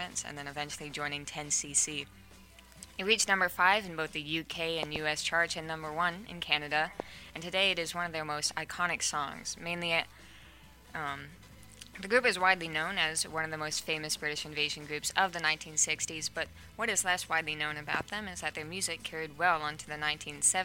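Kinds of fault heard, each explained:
Loud pop: sharp pops stand well above the sound, which carries on underneath. There is a double at 4.83 to 4.98 s, a single at 7.00 to 7.02 s and another double at 17.95 to 18.03 s. The likely cause is a sudden voltage pulse added to the signal.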